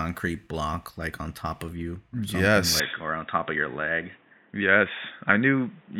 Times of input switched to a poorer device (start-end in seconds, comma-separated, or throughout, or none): 2.80-6.00